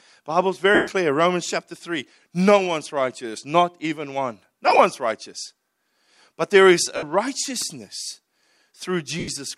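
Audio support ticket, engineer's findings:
Lost LE Audio frames, four events. LC3 concealment repeats the last spectrum with randomised signs and fades it, so speech briefly smears into noisy hiss. 0.75–0.88 s: 130 ms gap, fits about 17 frames at 7.5 ms, hiss sags. 4.67–4.79 s, after "righteous not even one": short dropouts scattered across 120 ms, none longer than about 15 ms. 6.96–7.03 s, after "there is": 60 ms smear. 9.19–9.28 s: 83 ms smear.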